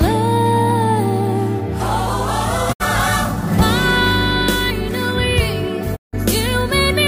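At 2.72 s the audio drops out for about 0.1 s, to 2.82 s, and again from 5.95 s to 6.15 s for about 0.2 s. Both are digital broadcast dropouts: the receiver stopped getting valid frames and muted until good ones returned. Each time the sound fades to silence over about 20 ms, then resumes. The first gap fits the loss of two 32 ms frames and the second fits five. Whatever was sent during those holes is gone.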